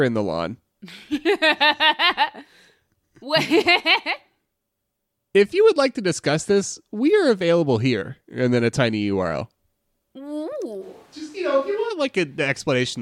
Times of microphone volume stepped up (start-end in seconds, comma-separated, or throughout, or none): none